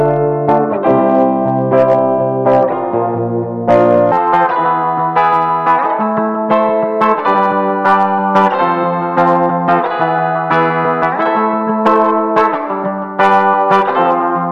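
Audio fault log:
4.12–14.51 s, section at the wrong speed: the sound jumps to about 1.49x, pitch rising roughly seven semitones, likely from playback against the wrong clock.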